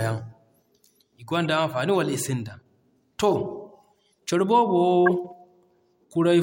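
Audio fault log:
1.44 s, 3.31–3.33 s, 5.06–5.11 s: corrupt frame decoded. Damaged frames played anyway, misplacing energy. Brief blips grow louder, from about -30 to -10 dBFS.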